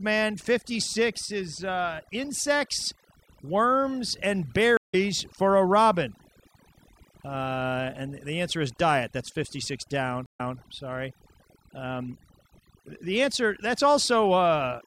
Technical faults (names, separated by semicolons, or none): overdone noise removal; stream reconnect